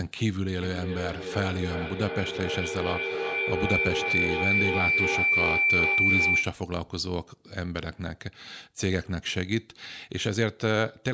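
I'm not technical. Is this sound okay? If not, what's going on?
No. From 0.61 to 6.63 seconds there is a feedback howl. It is a high whistle, around 2 kHz, that comes round again roughly every 0.4 seconds and gets louder than the speech. It happens when two devices on the same call sit in one room. A microphone picks up the sound from a nearby loudspeaker and sends it round again. Each trip makes it louder, until it becomes a single ringing tone.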